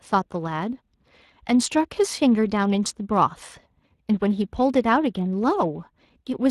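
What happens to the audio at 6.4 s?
At 6.4 s you're still hearing the Speex codec damage that runs through the whole clip. Speex is a CELP speech coder, and here its roughness is plainly audible, with a coarse, noisy edge on the speech that fits a setting somewhere around 22 kbps.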